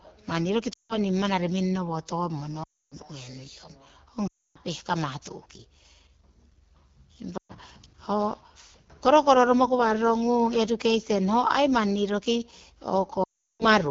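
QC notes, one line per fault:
Throughout: AMR wideband (HD Voice) codec. The speech sounds plainly rough and raspy, which points to a low mode around 8.85 kbit/s. On a spectrogram the harmonics look smeared, the band from 6.4 to 7 kHz is filled with shaped noise, and nothing appears above 7 kHz.
0.73–0.98 s, 2.63–2.95 s, 4.27–4.57 s, 7.37–7.54 s, 13.24–13.64 s: lost AMR speech frames. The gaps last 120 to 360 ms. The decoder repeats the last pitch and vocal tract settings with falling gain, so the sound drops to near silence within two frames, and it comes back rough. The waveform shows decaying envelopes. The spectrogram shows frozen harmonics fading into near-silence.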